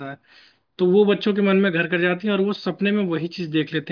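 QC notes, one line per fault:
No faults found in this speech clip. Nothing in it needs a note.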